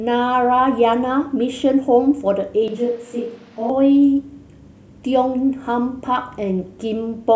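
A speech recording whose sound abruptly turns hollow and roomy from 2.68 to 3.70 s, a switch to a distant microphone, likely from the close microphone dropping out. The waveform steps down about 5 dB, while the spectrogram shows thinner bass and a raised noise floor roughly 25 dB below speech.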